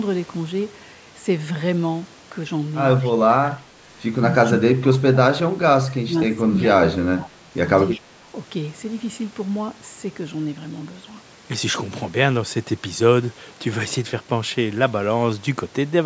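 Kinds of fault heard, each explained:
Echo leak: A faint delayed copy of the speech comes back about 200 ms after the original. It appears in short scraps near 3.0, 4.9 and 7.9 s, roughly 25 to 30 dB below the speech. A loudspeaker echo canceller likely let some pickup through.
Speech suppressed in double talk: The speech dips in short pieces near 3.2 and 3.6 s, then over longer stretches from 4.4 to 7.5 s. The deepest drops reach about 25 dB. An echo canceller likely turned down both talkers at once, unable to separate them.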